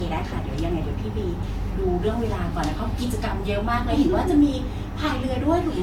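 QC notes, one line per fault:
throughout, generation loss: the speech has a swirly, watery smear and a hollow, scooped quality, with consonant attacks blurred rather than crisp, and nothing above 18.1 kHz. The damage is heavier than one lossy pass at this rate would leave, which points to the likely cause: repeated decoding and re-encoding, about three passes, at a rate that fits roughly 66 kbit/s Vorbis. Each pass quantises on a shifted frame grid, so noise and spectral holes accumulate.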